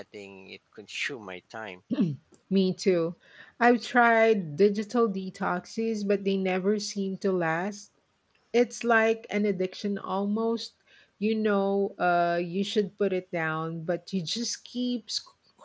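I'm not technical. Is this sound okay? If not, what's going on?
Yes, nothing in this recording sounds wrong.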